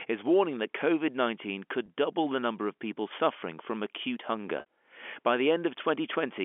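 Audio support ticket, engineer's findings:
Packet loss with pitch repetition on the telephone-band link (G.711 path, 300 Hz to 3.4 kHz, carries audio cleanly). Receiver concealment replays the last pitch period across each gap, giving a brief held, buzzy tone:

1.86–1.88 s, just before "double the number of": about 20 ms missing, fits one lost packet; short held buzz.

4.60–4.66 s, right after "people suffering from acute": about 60 ms missing, fits three consecutive lost packets; repeated period fades toward silence, speech resumes via short cross-fade.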